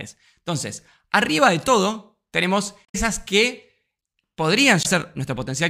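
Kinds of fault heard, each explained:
Damaged data in a compressed stream: corrupted bytes in the coded speech make the decoder misread frames and lose sync until it finds a valid header, producing garbled blips, one from 2.84 to 2.95 s just after "arriba de todo tenemos", another at 4.82–4.86 s.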